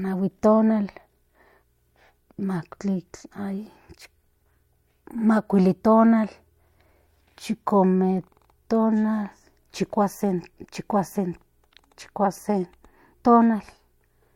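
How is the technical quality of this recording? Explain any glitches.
Nothing in the recording stood out as a technical problem on listening, so there are no glitches to explain.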